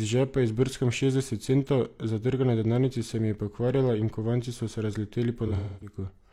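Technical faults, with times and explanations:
5.47–5.96 s, AAC frame loss with concealment: about 300 ms goes missing, nearly all in one stretch, which fits roughly seven dropped frames. The decoder fills the gap by reusing the last good spectrum, so that patch comes out smeared, noisy or phasey.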